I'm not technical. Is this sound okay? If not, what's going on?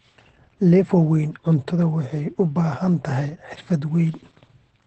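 No. Opus voice compression affects the whole clip, from start to finish. This speech was squeezed hard to save data, so everything above about 8.4 kHz was thrown away, which makes the voice sound muffled, like it's coming through a phone. The coder also rebuilds the voice from a rough model rather than the real sound, giving it a noticeably hoarse, slightly robotic edge.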